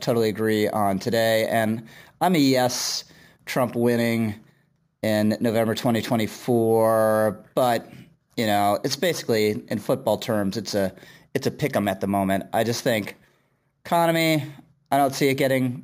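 Imaging from sample-and-hold upsampling runs through the whole speech recording. Each sample was simply repeated, consistent with a move from about 22 kHz to 44.1 kHz, so a mirrored spectrum fills 11.03 to 22.05 kHz about 22 dB down, heard as metallic fizz tracking the voice.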